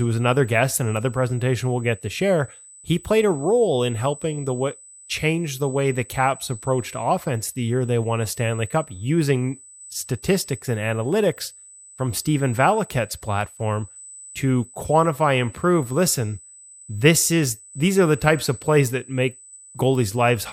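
Speech clip with USB whine throughout: current drawn in 125-microsecond USB microframes leaks into the audio path, adding a steady 8 kHz tone roughly 20 dB below the speech.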